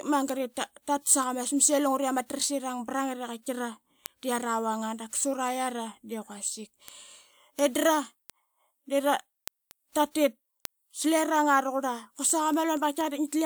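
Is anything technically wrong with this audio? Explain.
Yes. From 0.29 s to 13.24 s the speech carries word clock ticks: a sharp tick about every fifth of a second, some fifty in all, of uneven strength. The receiving device runs on its own clock, off by around a hundred parts per million, so a single sample is dropped or repeated each time the clocks slip. On a spectrogram they appear as thin full-height vertical lines at even spacing. The waveform shows tiny one-sample discontinuities.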